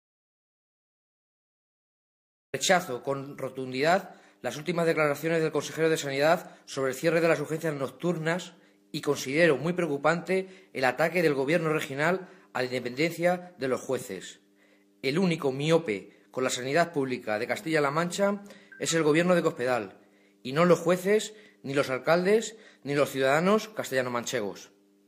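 From the very start until about 2.54 s there's an audio dropout to silence: pure silence, no room tone at all, before the sound kicks in mid-flow. Most likely the input was lost, say a disconnected or muted source, while recording carried on.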